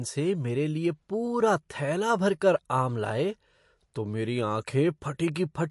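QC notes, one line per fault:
Throughout, MP3 compression: a low-bitrate MP3 encode is the likely cause, and the plainly audible damage fits roughly 48 kbps. Starved of bits, the encoder removes everything above 11.3 kHz and drops weak spectral lines frame by frame, leaving dull, watery, swirling speech.
5.35 s, pre-echo: the codec spreads quantisation noise across a whole transform block, so noise sized for a sharp attack late in the block leaks into the quiet before it. The result is a brief hiss about 10 ms ahead of the onset, which sounds softened.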